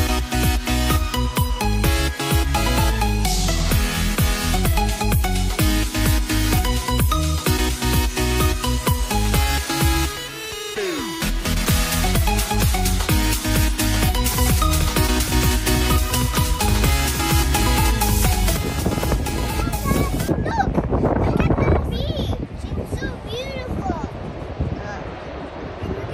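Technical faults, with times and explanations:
14.31–21.97 s doubled audio track: a second capture path or misaligned edit likely mixes in a copy about one and a half seconds late, a few decibels quieter, starting and stopping abruptly without room colour.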